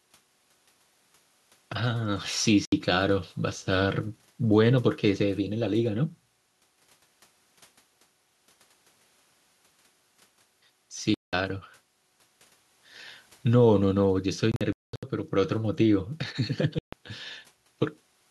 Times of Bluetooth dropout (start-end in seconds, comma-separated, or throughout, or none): 2.65-2.72, 11.14-11.33, 14.52-15.03, 16.79-16.93